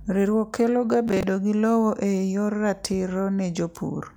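From 1.08 to 1.23 s, just before "gi lowo eyor", processor overload crackle tears through the speech: a rapid run of hard-edged repeats of stale audio, consistent with roughly seven missed deadlines on buffers of around 10 ms. The grit stops cleanly once processing catches up.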